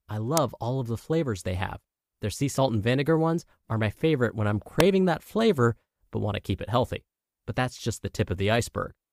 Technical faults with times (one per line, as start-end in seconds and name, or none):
0.37 electrical switching spike
4.80 electrical switching spike